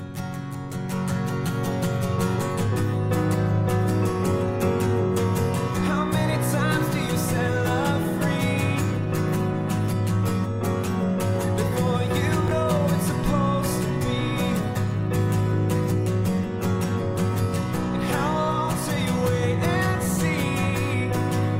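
A short burst of chunks out of order occurs from 12.48 to 12.51 s: one 10 ms chunk plays two chunks late, after the two that should follow it, jumbling the audio briefly. The waveform shows three hard discontinuities, and the spectrogram shows thin vertical broadband lines at each join.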